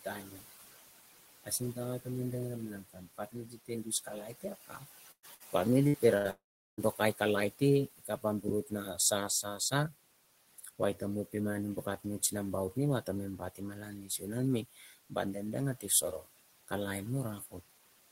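Noise suppressor artifacts run through the whole clip. The suppressor pulls the room noise, which sits about 15 dB below the speech, down by about 17 dB between phrases and lets it back up under them. This frame-by-frame gating makes the residual background sink between phrases and rise under them rather than stay steady.

Speech cut by the noise suppressor first appears between 0.05 and 0.64 s and again between 1.44 and 2.06 s. The suppressor misreads quiet parts of the speech as noise and drops them by up to about 12 dB and 16 dB respectively, affecting roughly a fifth and a tenth of a second of material. Soft onsets and word tails there sound swallowed.

A longer stretch of the same problem spans 2.89 to 9.93 s, with drops of up to about 18 dB across roughly a second and a half of scattered low-level speech. Inside it, bursts of packet loss hit at 5.11–5.26, 5.35–5.43, 5.88–5.97 and 6.18–6.28 s. 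The last three each lose about 60 ms of audio, and the first about 120 ms. The receiver bridges each gap by extending the last sound into a short fading buzz or hiss, and the first burst decays to silence for about 70 ms. The speech then jumps ahead with the lost section absent.

Immediately after, from 6.31 to 6.81 s, about half a second of audio is missing, likely from a long network dropout. The concealment stretches the final sound briefly, then leaves about 0.39 s of silence before the speech resumes further along.

Speech cut by the noise suppressor returns from 10.49 to 16.72 s, with drops of up to about 17 dB over roughly a second of quiet syllables. It appears once more from 17.39 to 17.71 s, at about 17 dB over roughly a tenth of a second, again turning soft endings faint.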